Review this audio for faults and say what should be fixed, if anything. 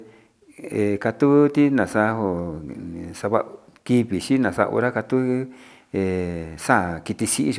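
No faults turn up in this audio, so nothing needs to be fixed.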